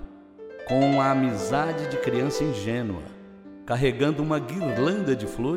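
No technical faults can be heard in this clip.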